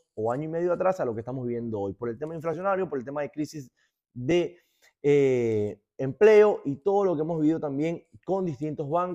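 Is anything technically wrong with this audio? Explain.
No, nothing in this audio stood out as technically wrong on listening.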